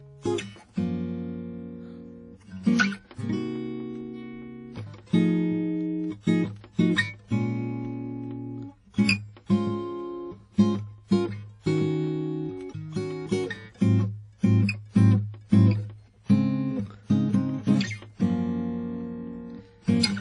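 Music, likely put through WMA compression at what sounds like about 32 kbps: everything above 10.1 kHz is gone, and smeared quantisation noise leaves a ringing, washy hiss that breathes with the music throughout.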